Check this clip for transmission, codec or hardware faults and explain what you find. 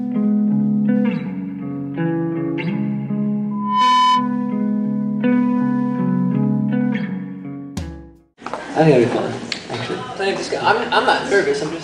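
One fault is present. Loudspeaker feedback squeal, 3.51 to 4.40 s: the microphone re-captures its own loudspeaker, so a 1 kHz tone swells quickly, rising slightly above the sound.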